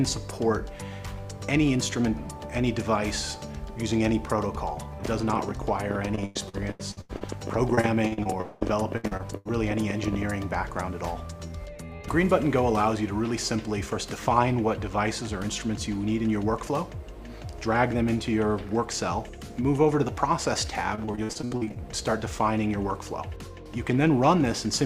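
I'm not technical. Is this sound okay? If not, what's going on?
No, there are two problems. From 5.05 to 10.23 s there's a train of clicks: about 11.6 irregular ticks or pops per second, roughly seventy in all, audible even in the quiet bits. It's likely interference from nearby equipment or a faulty connection or power supply.

There's also repeated packet loss, which makes the sound choppy and robotic at 6.15 to 7.23 s, 7.75 to 9.47 s and 20.95 to 21.78 s. Bits kept going missing, and each hole got patched by stretching the previous sound, so about a third of those stretches is filler. The longest hole is about 0.2 s.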